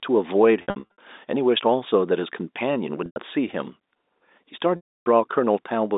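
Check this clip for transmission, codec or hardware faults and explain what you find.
There's packet loss with pitch repetition in three places, over narrowband telephone-style audio. From 0.62 to 0.98 s, short gaps are scattered and held buzzily. At 3.06 to 3.16 s there's a single 100 ms bridge, and from 4.76 to 5.06 s a 300 ms loss fades toward silence. The receiver repeats the last pitch period to cover each gap.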